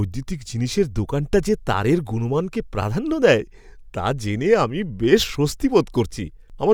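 No technical faults can be heard in this recording.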